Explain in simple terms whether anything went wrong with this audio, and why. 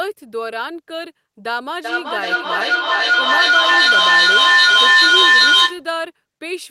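Feedback echo between two devices: two devices on one call looped sound, and from 1.84 to 5.87 s speech repeats about every 0.4 s, building up.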